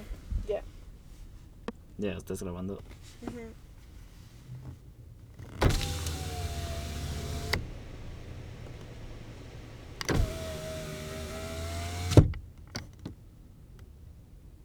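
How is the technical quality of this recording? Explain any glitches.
No glitches or technical faults are audible anywhere in the recording, so there is nothing to explain.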